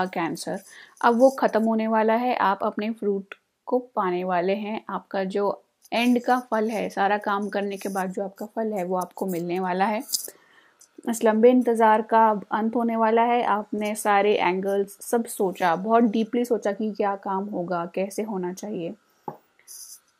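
No technical faults can be heard.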